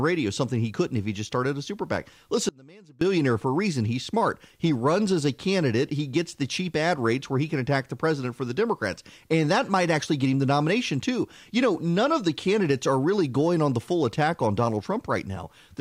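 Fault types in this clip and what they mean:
Audio dropout to a faint residue: the speech cuts off abruptly from 2.49 to 3.01 s, about half a second, leaving only a faint trace of the signal roughly 25 dB below normal before it returns on "for a reason"; the likely cause is a brief signal-path break.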